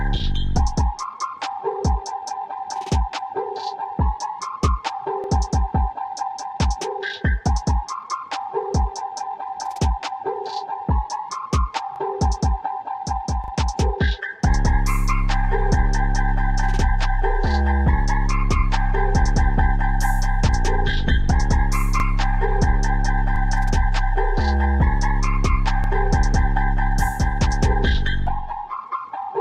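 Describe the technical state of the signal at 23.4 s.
At 23.4 s a repeated buffer occurs: new audio failed to arrive in time, so the device replayed its last block, about 40 ms long, once more, from 23.36 to 23.40 s. The same sliver of sound plays twice with a hard join, heard as a brief stutter, apparently with nothing dropped.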